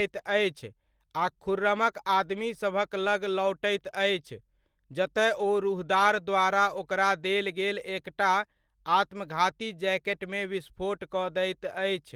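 A speech recording with no technical faults to report. Nothing in it calls for a time or a cause.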